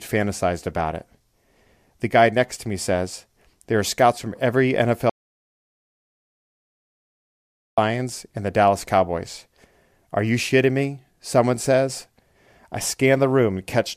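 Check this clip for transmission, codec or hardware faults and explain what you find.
One fault is present. Audio dropout to silence from 5.10 to 7.78 s: the input signal was likely lost, through a broken link or disconnected device, while recording continued writing silence. The speech cuts off mid-flow into 2.68 s of dead silence, with no room tone, then returns abruptly.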